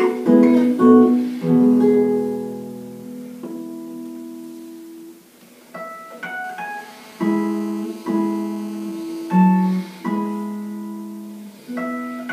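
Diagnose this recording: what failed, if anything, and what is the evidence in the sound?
The analogue wiring picked up GSM phone buzz from 6.44 to 9.37 s: a raspy, harmonic-rich buzz at about 217 Hz, nearly steady, around 25 dB below the signal. A nearby 2G phone's call bursts were rectified in the audio circuit. Unlike mains hum, 217 Hz is no multiple of 50 or 60 Hz.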